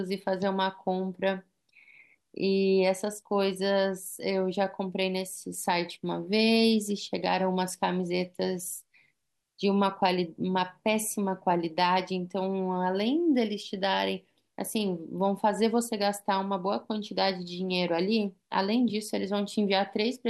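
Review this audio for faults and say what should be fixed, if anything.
Nothing here needs fixing, since no faults turn up anywhere in this recording.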